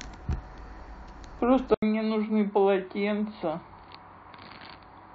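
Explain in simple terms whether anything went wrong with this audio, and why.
Input switched to a poorer device, at 1.74 s: after a brief 80 ms gap, the speech turns duller and a little quieter, with nothing above about 4.7 kHz and a faint new background noise. The recording likely jumped to a lower-quality microphone mid-recording.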